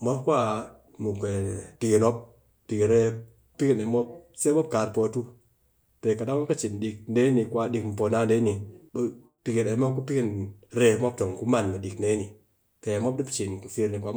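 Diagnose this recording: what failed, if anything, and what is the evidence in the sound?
No fault detected in this recording.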